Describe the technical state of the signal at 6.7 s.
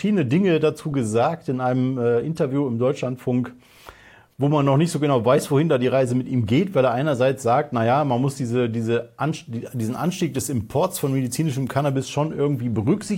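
At 6.7 s the signal is intact, with no audible fault present at that moment.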